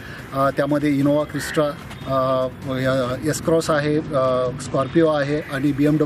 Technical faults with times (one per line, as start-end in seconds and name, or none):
3.72-5.41 Bluetooth SBC bit pool drop